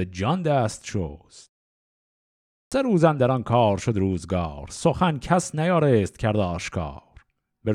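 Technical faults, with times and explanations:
2.62–2.72 s, clipped start after a pause: after a silence of about 1.2 s, the output path has gone idle and needs time to wake, so the first 97 ms of the returning speech never reaches the output and the utterance begins abruptly, missing its onset. On a waveform the trace jumps from flat silence straight to speech level with no rise; a spectrogram shows a hard vertical edge where the soft leading energy should be.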